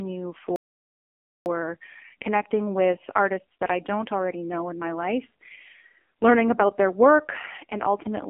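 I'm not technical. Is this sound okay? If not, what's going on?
No. There are three problems.

The whole recording has gone through the AMR narrowband mobile codec, the squeezing used on older mobile phone calls. It throws away everything above about 3.4 kHz, so the voice sounds thin and muffled, like an old phone line. It is also squeezed very hard. That makes the speech buzzy and robotic, with a synthetic edge.

At 0.56 seconds the sound suddenly stops. This is a playback stall. The silence lasts about 0.9 seconds, until 1.46 seconds. The likely cause is that the player ran out of audio data and had to wait for more.

Right after the gap there is a time-compressed catch-up. From 1.46 to 4.46 seconds the player hurries to make up the lost time. It runs about 1.1 times faster than normal, but the pitch stays the same. It does this by cutting out tiny slices and blending the edges together. 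So the speech sounds rushed. Normal pace returns just before "in my life".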